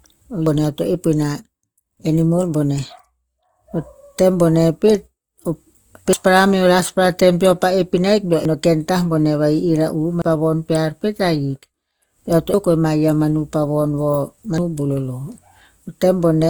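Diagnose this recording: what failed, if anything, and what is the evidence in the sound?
Codec stage. The speech has a steady rough, grainy texture from start to finish. The bandwidth stays wide, at full band, so it isn't muffled. The graininess points to Opus compression in its music (CELT) mode, likely at around 24 kbps. At that rate the encoder keeps each band's energy but fills detail with folded or noise-like content. Tonal parts of the voice come out noisy and rough instead of clean.

Driver or buffer stage. The sound jumps forward six times without any silence: at 0.46, 6.13, 8.45, 10.22, 12.54 and 14.58 s. Each jump is an abrupt change in the sound. At 8.45 s the cut falls between "ahik beo" and "ken tah boneh". At 10.22 s it falls just before "pa von". This is a dropped buffer (overrun), likely from the capture software reading too late. The losses run from about a tenth to about a third of a second.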